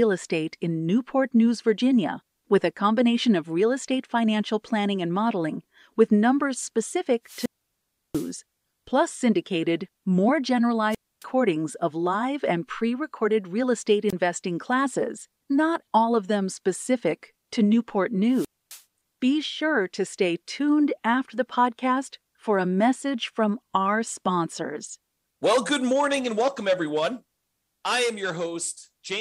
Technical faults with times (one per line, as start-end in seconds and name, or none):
7.25-8.33 wireless microphone squelch dropout
10.90-11.24 wireless microphone squelch dropout
14.08-14.13 wireless microphone squelch dropout
18.32-18.82 wireless microphone squelch dropout